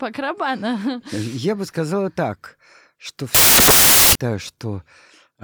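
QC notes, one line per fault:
3.35–4.15 s, samples built from the wrong bytes: right after "бы сказала так что" the speech gives way to loud, harsh broadband noise for about 0.8 s. The reader is assembling each sample from misaligned or swapped bytes, so the rapidly changing low-order bits land in the high-order position and dominate every value, turning the waveform into broadband hiss.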